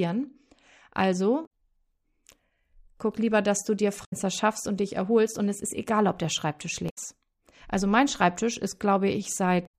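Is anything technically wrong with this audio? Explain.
Yes. The speech has damaged data in a compressed stream at 1.43–1.47 s, 4.01–4.13 s (after "lieber dass du dir", before "schaffst und dich erholst"), 6.86–6.98 s and 9.63–9.67 s. Bad bytes make the decoder misread frames and lose sync. Each spot is a brief disruption where the decoder loses its place.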